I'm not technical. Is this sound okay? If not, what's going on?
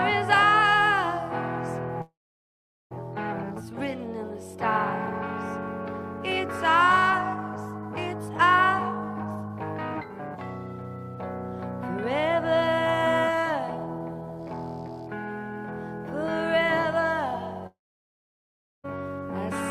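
No. At 2.01 to 2.93 s and 17.67 to 18.86 s the sound fades to silence and returns with a piece missing, likely a long network dropout, too long for a brief glitch.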